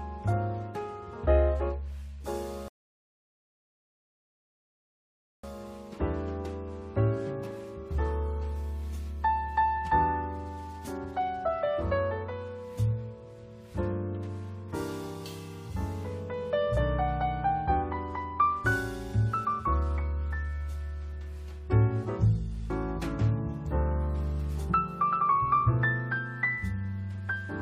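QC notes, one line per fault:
2.68 to 5.44 s, rebuffering stall: playback halts into silence for 2.75 s, then resumes exactly where it stopped, adding time without skipping any audio, unlike a dropout.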